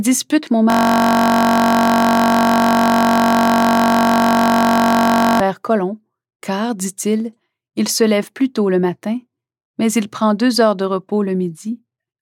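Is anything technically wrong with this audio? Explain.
Yes. System hang loop, 0.70 to 5.40 s: the system froze while playback kept cycling one 21.33 ms slice, which fits a 1024-sample buffer, producing a steady 46.9 Hz buzz.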